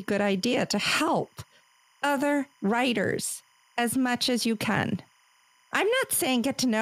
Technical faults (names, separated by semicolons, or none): timecode bleed